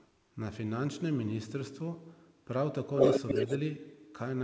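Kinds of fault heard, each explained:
Echo leak: A delayed copy of the speech trails the original by 234 ms, first as a faint scrap far below the talker in the opening 0.12 s, then from 2.95 to 3.58 s as a strong repeat that is louder than the speech itself. The likely cause is a loudspeaker on the far end whose echo canceller failed to remove what its microphone picked up, so that sound travelled back down the line.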